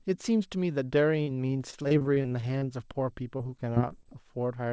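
Repeated packet loss (robotic sound) runs from 1.22 to 2.96 s: fifteen short holes, the longest 45 ms, each patched by stretching the preceding sound. Extended waveform fills roughly 18% of that span, leaving the speech choppy with fragments missing. The whole signal stays band-limited below 8 kHz, as the G.722 call path leaves it.

A jitter buffer slow-down overlaps this from 2.64 to 3.24 s. To rebuild its reserve, the receiver repeats single pitch periods, adding 38 ms and running the speech at 95% speed without changing pitch, so sounds drag slightly.

Repeated packet loss (robotic sound) returns from 3.37 to 4.08 s with eight gaps, none longer than 19 ms, concealed the same way. It sounds briefer and lighter than the first stretch, with the same chopped texture.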